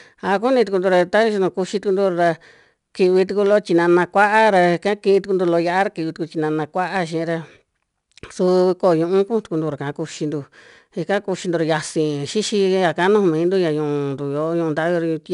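All the way through, the speech carries 4-bit ADPCM compression. Coarse predicted steps leave gritty hiss on loud syllables, and nothing remains above 10.7 kHz.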